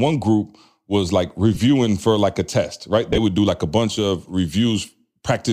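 At 1.55 to 1.57 s there is a brief gap from lost LE Audio frames. About 15 ms is missing, which fits two 7.5 ms frames. The decoder covers the hole by repeating the last spectrum with scrambled phase, so the speech turns into a short noisy smear. From 3.10 to 3.18 s more frames drop, about 52.5 ms lost, scattered across 75 ms. The longest run is about 20 ms. The sound smears into noise there. The light, faintly grainy edge heard throughout is likely Bluetooth LC3 compression.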